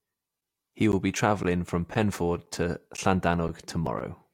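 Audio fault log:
0.41, 0.92, 1.43, 1.94, 2.46, 2.97, 3.48, 3.99 s, gap between chunks: the speech stops for 12 ms after every 0.5 s chunk because silence is inserted at each join. The waveform shows flat, hard-edged dropouts, and the spectrogram shows thin, evenly spaced empty vertical strips.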